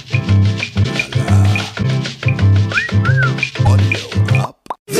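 At 0.82–0.85 s, 1.82–1.85 s and 3.65–3.68 s the audio skips ahead with a brief corrupted patch of about 30 ms, roughly one 26 ms frame. The likely cause is a broken MP3 bit reservoir: after frames were lost, the following frame fetched borrowed data from the wrong place.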